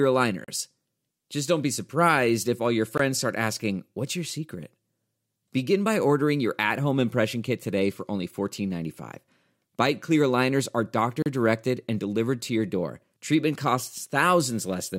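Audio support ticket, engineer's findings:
Bluetooth stall, likely link interference delaying packets until the headphone buffer ran dry. Speech drops to brief silence, then resumes: 0.44–0.48 s (36 ms); 2.98 s (18 ms), between "surprised if all your" and "start asking"; 11.22–11.26 s (36 ms), after "clear aligners are".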